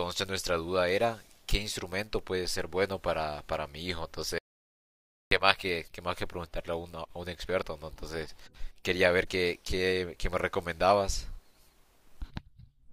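At 4.38 s the speech cuts to total silence, with no room tone, until 5.31 s. This audio dropout to silence, about 0.93 s, likely came from lost input.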